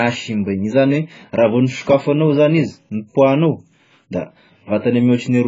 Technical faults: AAC compression

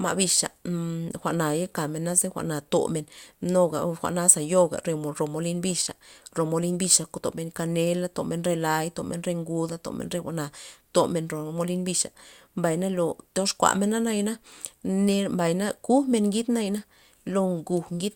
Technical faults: none

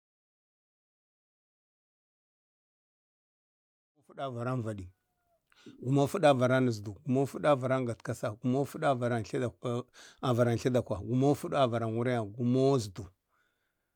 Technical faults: none

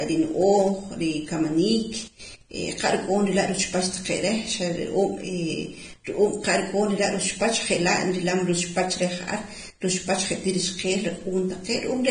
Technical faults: Vorbis compression

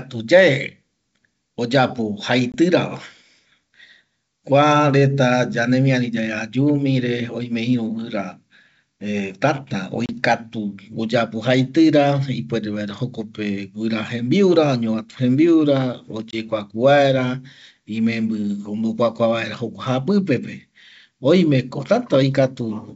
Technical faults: packet loss on an ADPCM call

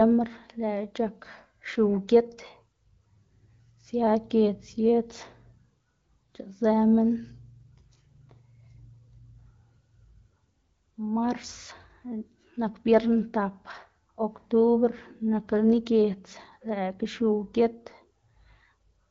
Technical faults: none

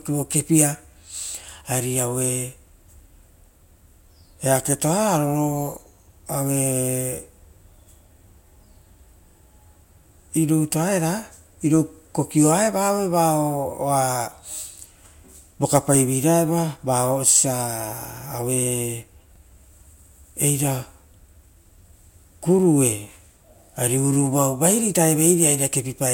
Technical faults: overlapping chunks

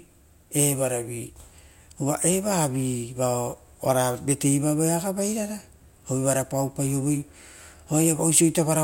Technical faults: none

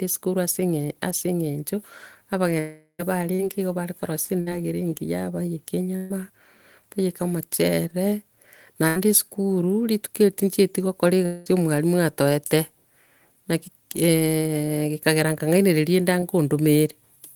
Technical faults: long network dropout; short concealed packet loss; burst of packet loss

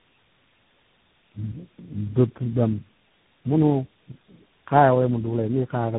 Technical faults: tandem speech coding

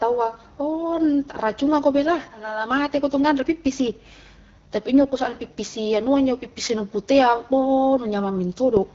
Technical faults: AMR wideband (HD Voice) codec

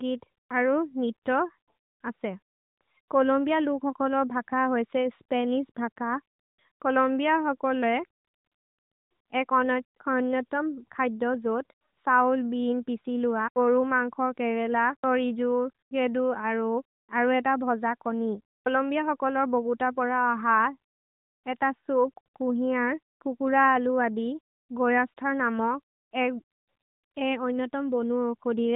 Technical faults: none

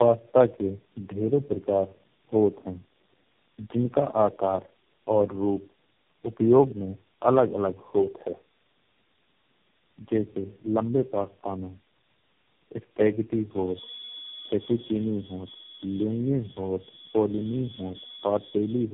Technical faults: tandem speech coding

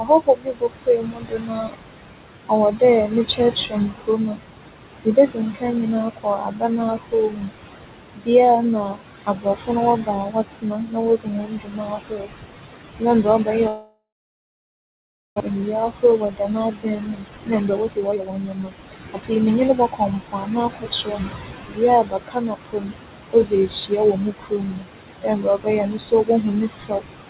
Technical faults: noise suppressor artifacts; speech cut by the noise suppressor; long network dropout; jitter buffer speed-up

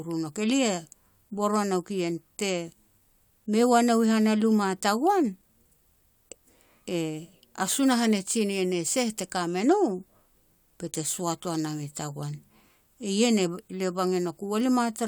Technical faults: none

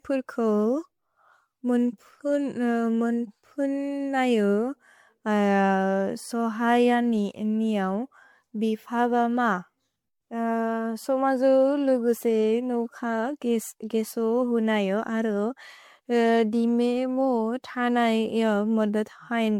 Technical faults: generation loss

